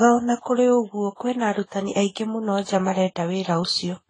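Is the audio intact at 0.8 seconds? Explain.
No. At 0.8 seconds, as throughout the speech, there is audible damage from transcoding between lossy codecs. Nothing is present above about 9.9 kHz, and two layers of coding artefacts are heard together. The likely cause is a low-rate AAC-LC encode, around 24 kbit/s, re-encoded as Vorbis near 23 kbit/s. The second encoder spent its bits on the first encoder's artefacts, added its own, and kept the band limit.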